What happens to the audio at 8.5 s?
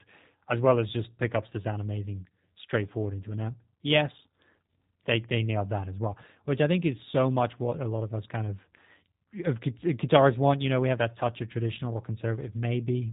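G.729 codec damage is present at 8.5 s, as it is across the whole clip. Rather than carrying the waveform, the coder rebuilds the speech from a vocal-tract filter, a pitch predictor and a few pulses per 10 ms frame, and passes nothing above 4 kHz. The result is clearly audible: muffled, band-limited speech with a rough, synthetic edge, which fits the 8 kbit/s G.729A variant.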